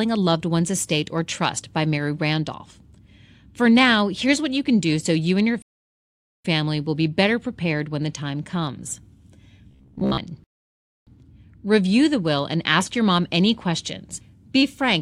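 A rebuffering stall runs from 5.62 to 6.45 s. Right after "so you and your" the speech drops to silence for about 0.82 s, then picks up cleanly with "will be better prepared". Playback ran out of downloaded audio and waited for more, so nothing is skipped. The pause just stretches the clip. A second rebuffering stall, from 10.44 to 11.07 s, adds another 0.63 s of silence before the speech resumes where it left off.

Robotic sound from repeated short buffers appears between 9.71 and 10.18 s. The speech turns into a stiff, metallic buzz locked at about 67 Hz, still loosely following the rhythm of the speech. The likely cause is audio arriving too slowly, with the player looping the most recent fragment of about 15 ms to fill the gaps. That repetition sets the fixed buzz pitch, while roughly seven tenths of the real audio in that stretch is skipped.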